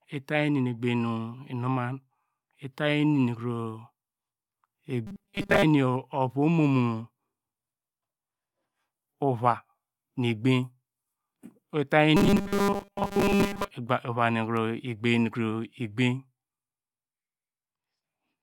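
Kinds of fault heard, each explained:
Robotic sound from repeated short buffers: twice in this speech, around 5.07 to 5.65 s and 12.17 to 13.71 s, the voice turns into a rigid metallic buzz at 200 Hz. That's likely from audio arriving too late, so most of it gets skipped while a roughly 5 ms chunk loops.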